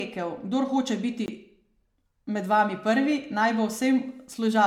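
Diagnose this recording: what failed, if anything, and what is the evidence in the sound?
The speech sounds swirly, smeared and hollow throughout, and consonant attacks blur. This is generation loss at the codec stage, likely from about ten successive lossy passes that fit MP3 at 128 kbit/s. Each re-encode quantised afresh on a shifted frame grid, compounding noise and spectral holes.

A block of digital silence runs from 1.26 to 1.28 s, about 20 ms. The sound drops straight to silence and returns without a fade. This points to the driver or buffer stage, where the output buffer went unfilled.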